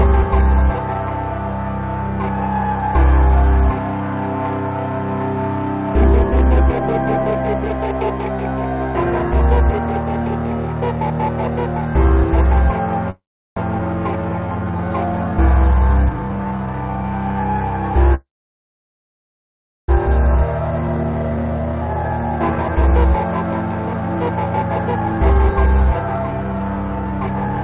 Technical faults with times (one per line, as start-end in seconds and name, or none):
13.10-13.58 call audio freeze
13.78-13.81 skip ahead
14.11-15.36 jitter buffer slow-down
18.14-19.90 call audio freeze
20.35-22.76 jitter buffer speed-up
23.73-27.63 jitter buffer speed-up